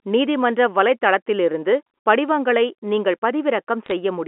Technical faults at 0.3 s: none

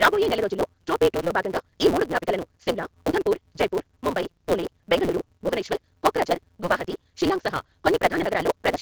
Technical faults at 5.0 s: AMR wideband (HD Voice) codec; block size mismatch (truncated)

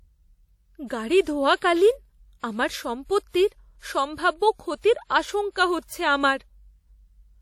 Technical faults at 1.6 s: WMA compression; pre-echo

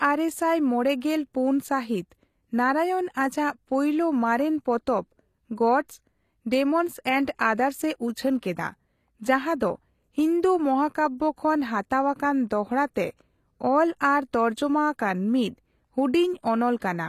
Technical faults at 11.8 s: HE-AAC compression

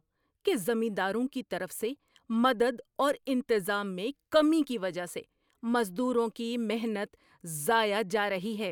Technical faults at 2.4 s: none

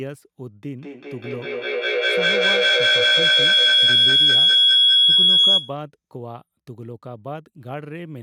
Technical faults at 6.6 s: none

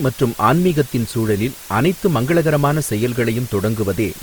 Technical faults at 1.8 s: low bit depth with dither; Opus compression

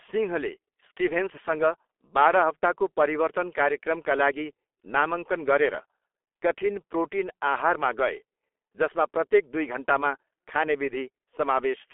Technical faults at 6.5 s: G.723.1 codec

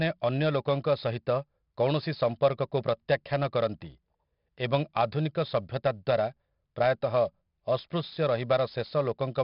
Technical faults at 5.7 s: 4-bit ADPCM compression

